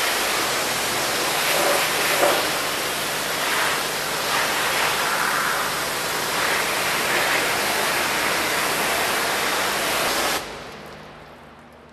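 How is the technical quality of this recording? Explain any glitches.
There's one glitch to flag, right near the end. At 11.12 s there's an overlap between stream segments: two segments, which look to be about 4 seconds long, had overlapping time stamps, so the player trimmed a few milliseconds of real audio. The waveform jumps across the gap, heard as a tiny skip.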